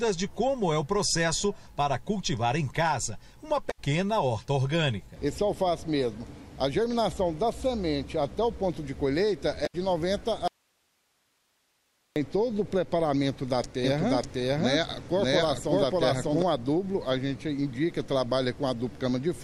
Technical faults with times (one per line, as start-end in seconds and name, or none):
3.67-3.79 damaged data in a compressed stream
9.63-9.75 damaged data in a compressed stream
10.48-12.16 audio dropout to a faint residue
13.84-16.42 doubled audio track